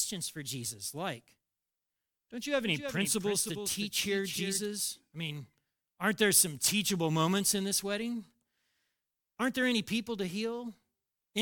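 From 2.63 to 4.65 s, just after "don't you have" and ending before "I mean aren't there", a doubled audio track appears, likely because the same speech was captured a second time through a slower path. A full-band copy trails the original by roughly 0.3 s, about 10 dB quieter, with no reverberant tail or room colour. It cuts in and out abruptly at both ends.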